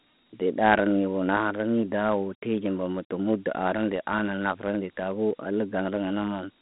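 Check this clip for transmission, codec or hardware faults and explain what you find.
One codec fault is present, lasting the whole clip. Dialogic VOX ADPCM, throughout: coarse 4-bit adaptive step coding, consistent with 32 kbps, leaves gritty hiss trailing the speech, confined to roughly 200 Hz to 3.7 kHz, with nothing above 3.9 kHz.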